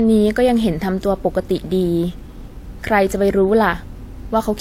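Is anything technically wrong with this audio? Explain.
Yes. Throughout the speech, the signal was likely transcoded between lossy codecs, pointing to a WMA encode at about 96 kbit/s followed by HE-AAC at about 32 kbit/s. HE-AAC wastes bits re-coding WMA's artefacts and adds its own, so both sets of artefacts are heard together, with nothing above 16.2 kHz.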